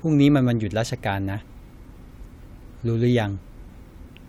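A short recording of speech with no technical fault to be heard. Nothing in the signal chain stands out at any point, so there are no times or causes to give.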